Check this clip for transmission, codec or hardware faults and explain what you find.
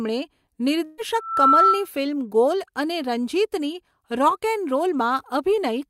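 Two faults appear, both in the first two seconds of this speech recording.

From 0.85 to 1.00 s there is a burst of packet loss. The sound stops moving forward and the last fragment is stretched into a sustained sound that fades. Then the speech jumps ahead with about 120 ms missing. Several consecutive packets failed to arrive in time, and the receiver filled the roughly 123 ms hole by continuing and attenuating what it had last played.

From 1.17 to 1.88 s a loudspeaker feedback squeal takes over. A steady 1.3 kHz tone appears, swells over roughly a third of a second and then rings at about 10 dB above the speech until it stops. A microphone was hearing its own loudspeaker, and at that frequency the round-trip gain went above unity, so the tone kept reinforcing itself.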